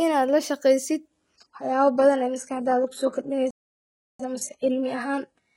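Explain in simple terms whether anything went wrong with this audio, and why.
Yes, two things went wrong. First, the adaptive stream switched to a lower bitrate at 1.08 s and stayed there to the end. The service moved to a smaller, cheaper version of the speech, with no gap in the sound. From that moment compression artefacts creep in.

Second, there is a playback stall from 3.51 s to 4.19 s, a silence of about 0.69 s in the middle of the speech before it carries on. The player most likely ran short of incoming data, or was held up internally, so it had nothing to send to the speakers. Once it caught up, the sound resumed.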